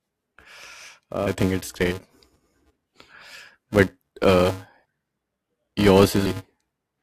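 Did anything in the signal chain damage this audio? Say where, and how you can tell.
Yes. A steady buzz at 375 Hz rides on the speech for the whole clip, and its level rises and falls with the talker, disappearing in pauses. That points to a filter restarted on every block in the driver or buffer processing stage: the filter loses its state at each block boundary and restarts from silence, leaving a small transient every time. The rate fits a 128-sample block. Mains hum would sit at a fixed level, even in silence.

The second fault is in the codec or storage stage, where compressed frames were skipped. At 1.26 s, just before "think it's great", roughly 200 ms of speech is missing. At 3.63 s, just before "but uh", and again at 4.84 s, just after "but uh", about 100 ms is gone each time. These lengths fit whole 21.3 ms frames being dropped. A buffer dropout would leave a gap of silence or a sharp click.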